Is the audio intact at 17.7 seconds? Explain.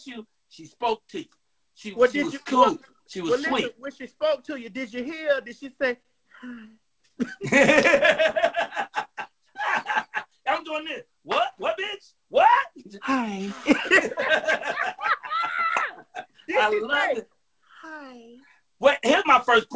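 Yes, the audio is intact at 17.7 seconds, with only the call path's usual band limit, nothing above 8 kHz, as expected from a wideband codec such as G.722.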